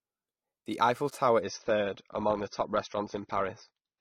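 At 1.41 s the sound switches abruptly to an adaptive stream at a lower bitrate, and the lower quality holds to the end of the clip. The connection slowed, so the player swapped to a cheaper encoding without any gap. The change points to AAC falling from around 96 to around 24 kbit/s. Treble vanishes above 6.3 kHz, leaving the speech dull, with codec artefacts rising. On a spectrogram the upper band is cut off by a flat ceiling from that moment, while the waveform stays continuous.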